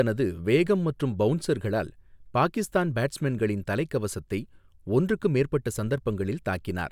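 The speech recording has no audible technical faults at any point.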